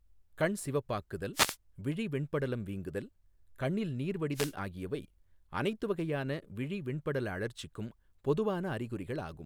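Speech marred by two wireless microphone noise hits: a swish of static from about 1.33 to 1.57 s, just after "கண் சிவப்பாக்குதல்", and again from 4.33 to 4.54 s, after "வெண்படலம் வீங்குதல் கண்ணில் நீர்". Each time the FM radio link fades as reflected signals cancel, so receiver noise surges over the voice for about 0.2 s. On a spectrogram these appear as short broadband vertical bands of hiss; the waveform shows dense noisy fuzz masking the speech envelope.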